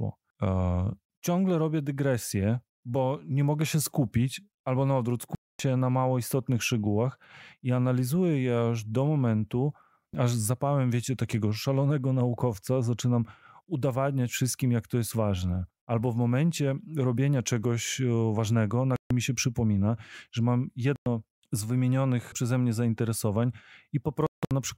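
Four Bluetooth dropouts, likely from packets reaching the headphones too late, cut the speech to silence at 5.35–5.60 s, 18.96–19.11 s, 20.96–21.06 s and 24.27–24.51 s, resuming as if it had played on.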